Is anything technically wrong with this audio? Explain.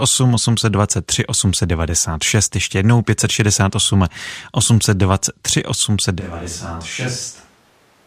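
Yes. At 6.22 s the speech abruptly turns roomy, hollow and bass-light, falls roughly 10 dB and gains room noise about 30 dB below it, staying so to the end. This is likely a switch to a distant microphone; a simple gain drop would not add reverberation.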